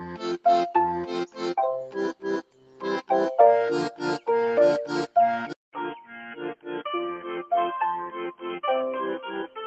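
Throughout the clip, a noise suppressor applied to music or sounds keeps nudging the level up and down by about 5 dB. Sustained parts and decays sink while attacks pass, so the sound pumps and thins. Unlike a compressor, it reacts to steadiness, not loudness.

From 2.42 to 2.83 s, the sound is cut by the noise suppressor, dipping as much as about 12 dB for roughly 0.4 s. It is a single deep hole, not the general pumping.

At 5.53 s, the sound drops out for 200 ms, then returns about 5 dB quieter, boxy and dull, with a new hiss roughly 30 dB below the signal. The band stays narrow to the end. This is most likely an input switched to a poorer device, since the tone, level and noise floor all change at once, at one moment.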